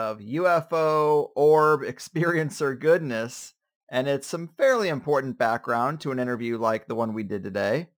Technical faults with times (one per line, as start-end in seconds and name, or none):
0.00-7.97 crude rate conversion